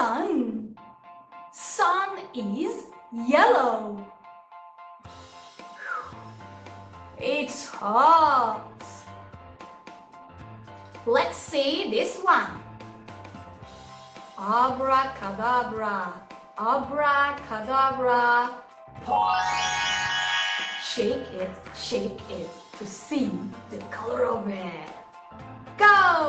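No technical faults are audible.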